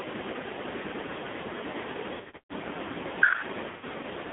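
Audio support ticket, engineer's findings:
Band-limited speech, 200 Hz to 3.6 kHz, throughout. Heavy buzzy, synthetic colouring. Component: AMR narrowband mobile codec. The vocal-tract model gets only sparse pulse excitation. That points to a low AMR-NB mode, around 6 kbps.

Dropouts at 2.14 to 2.54 s and 3.70 to 3.84 s. Lost AMR speech frames. The decoder repeats the last pitch and filter with decaying gain. First event: 320 ms lost across 360 ms, longest run 140 ms. Second event: 120 ms.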